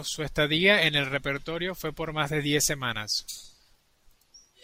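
Nothing in the recording points to a technical fault; the speech signal stays intact and continuous throughout.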